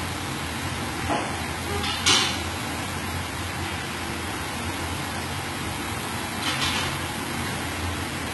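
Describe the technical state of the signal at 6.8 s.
HE-AAC compression is at work at 6.8 s, as it is across the whole clip, with nothing above 11.8 kHz. The treble is likely rebuilt from copied lower bands rather than coded, consistent with a very low bitrate near 16 kbps, so high detail sounds heavily gritty and metallic.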